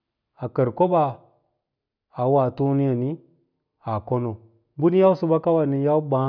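A short speech recording with no technical fault to point to. Nothing in the audio calls for a time or a cause.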